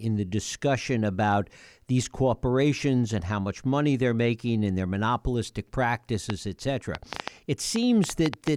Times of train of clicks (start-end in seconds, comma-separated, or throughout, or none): 6.30-8.48